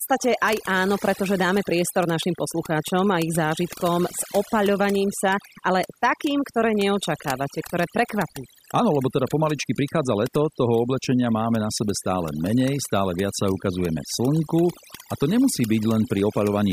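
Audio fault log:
Throughout: overdone noise removal. The denoiser's been pushed way too hard, so any band sitting near its noise estimate gets shut off, and the quieter bits of the speech go with it. That leaves near-silent gaps with twinkly specks.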